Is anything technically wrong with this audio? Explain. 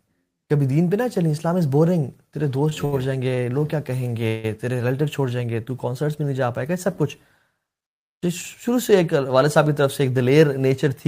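Yes. The speech has three short stalls from late packets and one call audio freeze.

The short stalls from late packets fall at 2.69 to 2.73 s, 2.85 to 2.94 s and 3.34 to 3.39 s. Each time, the jitter buffer ran dry and the receiver stretched the last sound by 19, 70 and 32 ms until the packet arrived. The result is a briefly held, faintly buzzy sound, with nothing lost.

The call audio freeze runs from 4.27 to 4.46 s. The sound hangs and is extended for about 162 ms as a fading buzz without dropping to silence, then resumes where it stopped. The likely cause is packets held up in transit, emptying the jitter buffer.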